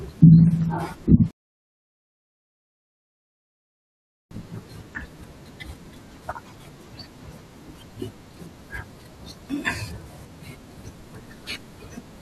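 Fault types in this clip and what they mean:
Rebuffering stall: at 1.31 s the speech drops to silence for 3 s because playback ran dry, then resumes exactly where it stopped, losing nothing.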